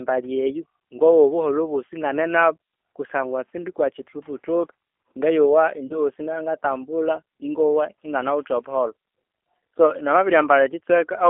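From start to end, the speech carries G.729 codec damage. It is band-limited to roughly 300 Hz to 3.4 kHz, with nothing above. The coder rebuilds each frame from a filter, a pitch model and a few pulses. The result sounds plainly rough and synthetic, consistent with an 8 kbit/s voice coder.

At 5.87 s, a VoIP packet loss concealed by the speech codec occurs. About 30 ms of audio went missing, which fits a single lost packet. The decoder filled the gap by repeating its last pitch and filter at falling gain. This gives a brief, fading smear. The damage persists until about 6.00 s, while the decoder recovers.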